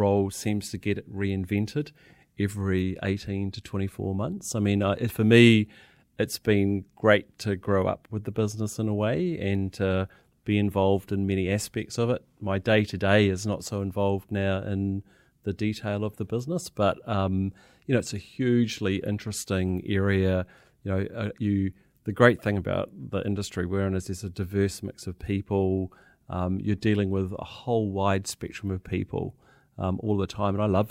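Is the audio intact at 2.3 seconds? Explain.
Yes, the speech at 2.3 s plays through cleanly, with no audible dropout, click, distortion or other fault at that moment.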